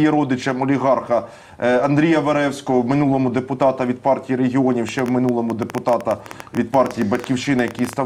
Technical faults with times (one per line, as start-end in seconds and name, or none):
4.89-7.94 train of clicks